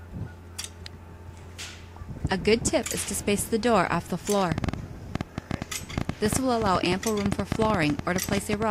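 A train of clicks runs from 4.52 s to 8.63 s: some forty similar pulses at about 9.3 per second, unevenly spaced and standing well above the sound, heard as irregular popping. This is likely interference from nearby equipment or a faulty connection or power supply.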